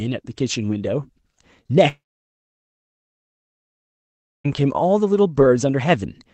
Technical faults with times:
1.63-1.71 short concealed packet loss
1.89-4.46 long network dropout

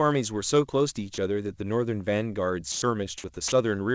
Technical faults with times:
1.14-1.18 sound dropped by the voice detector
2.72-2.82 sound dropped by the voice detector
3.48-3.52 sound dropped by the voice detector

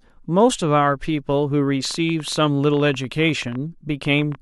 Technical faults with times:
1.85-4.36 train of clicks

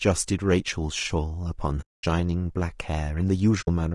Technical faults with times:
0.00-3.94 low-delay AAC compression
1.81-2.04 AAC frame loss with muting
3.61-3.68 AAC frame loss with muting

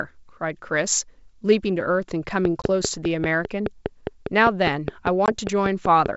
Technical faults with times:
2.45-6.07 train of clicks
2.62-2.71 packet loss on an ADPCM call
5.26-5.32 packet loss on an ADPCM call

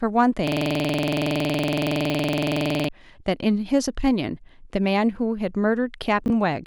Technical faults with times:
0.47-2.89 system hang loop
6.26-6.30 chunks out of order

